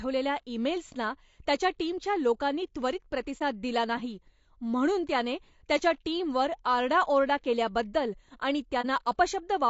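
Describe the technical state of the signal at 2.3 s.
At 2.3 s the speech carries low-delay AAC compression damage, present across the whole clip rather than at this moment alone. The sound is rough and grainy. The likely cause is an AAC-ELD encoder at a rate around 32 kbps, whose short frames resolve pitch harmonics poorly at that budget. On a spectrogram the harmonic lines look smeared, with noise filling the gaps between them, and the top band looks patchy and synthetic.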